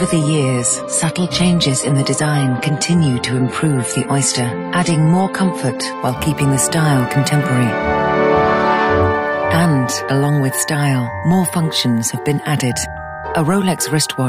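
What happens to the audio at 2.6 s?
At 2.6 s the sound is dull, with nothing above about 11.5 kHz and coarse, smeared coding artefacts. This is an adaptive stream starting at a low bitrate: from 0.0 s to 6.0 s the player is on a cheap version of the stream, which fits AAC at around 32 kbit/s, while it measures the connection. At 6.0 s it switches to a richer version, plausibly near 96 kbit/s, and the quality jumps up without any gap.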